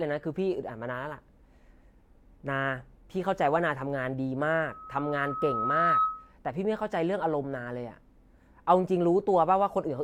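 Speech, with a loudspeaker feedback squeal from 4.59 to 6.33 s. A 1.3 kHz tone swells over roughly a second and a half until it sits a few decibels above the voice, because the mic is hearing its own speaker and that frequency keeps reinforcing itself.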